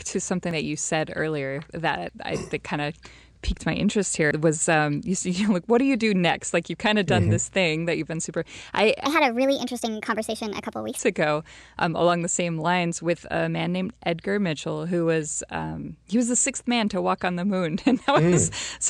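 At 0.51 s, just before "that you said earlier", and again at 2.09 s, the speech jumps ahead by about 40 ms with no gap. These are likely dropped buffers (overrun), where unread samples were overwritten. At 4.31 s, between "of piqued my interest" and "was um you see", a larger jump of roughly 150 ms clips the flow.

From 9.05 to 10.99 s, after "you've been super I", a section plays at the wrong speed, running 1.37 times fast and about five semitones high, until "ago um along the". The likely cause is playback against a mismatched clock.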